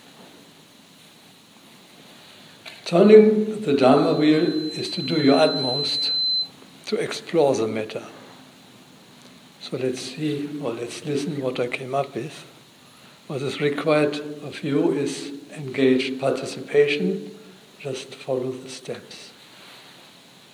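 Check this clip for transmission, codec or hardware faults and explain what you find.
One fault: loudspeaker feedback squeal, 3.80 to 6.54 s. A microphone re-captures its own loudspeaker, and at 4.1 kHz the loop gain exceeds one, so that tone swells until it matches the surrounding sound. A spectrogram shows one brightening horizontal line at 4.1 kHz.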